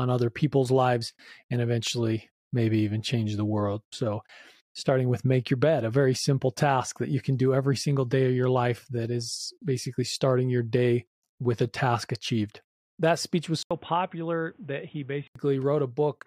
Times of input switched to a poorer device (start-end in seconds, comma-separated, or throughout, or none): 13.63-15.35